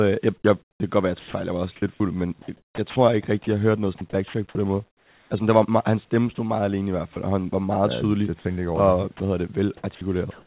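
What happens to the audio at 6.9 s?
At 6.9 s you're inside a stretch of sound chopped by the voice detector, from 6.35 to 7.16 s. The sender's detector likely switched off and on, swapping 60 ms of real audio for comfort noise, so it sounds choppy.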